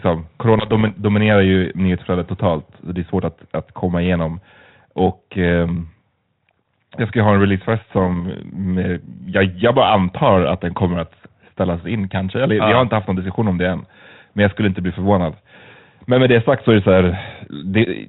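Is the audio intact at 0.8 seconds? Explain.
No. Bit errors on an ADPCM link corrupt the sound from 0.58 to 0.99 s, at a rate of around 0.3 percent. Each flipped bit throws off the decoder's step size and prediction. That causes pops, rough bursts and brief jumps in level on this 32 kbit/s G.726 link.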